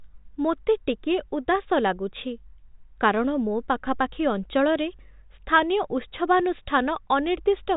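Nothing stood out on listening; the speech sits within a telephone band that stops near 3.8 kHz, as expected of G.726 ADPCM at what sounds like its 40 kbit/s rate, and nothing in it drew attention as a problem.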